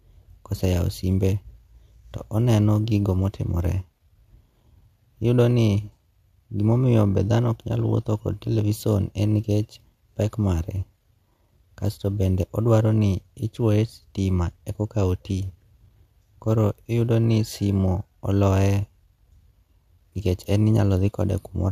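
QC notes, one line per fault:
Nothing to flag here; the speech runs with no faults to note anywhere in the clip.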